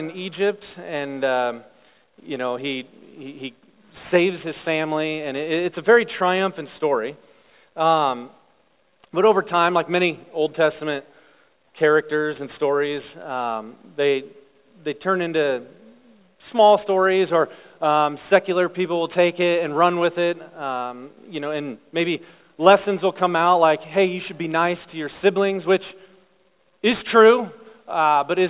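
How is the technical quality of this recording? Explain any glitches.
The recording has one fault, aliasing, present from start to finish. The sample rate was cut, which fits a drop from 44.1 kHz to 8 kHz, without first filtering out content above half the new rate. Everything above 4 kHz folds back below it as unrelated, false frequencies sitting roughly 30 dB under the signal, so bright, hissy parts of the sound turn gritty and metallic, and the spectrum runs hard right up to the 4 kHz edge.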